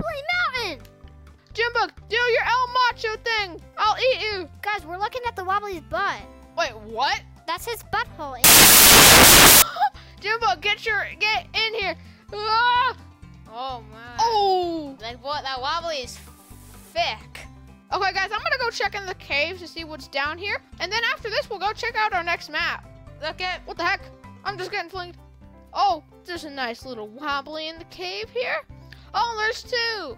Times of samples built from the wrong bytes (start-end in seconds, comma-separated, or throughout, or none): 8.44-9.62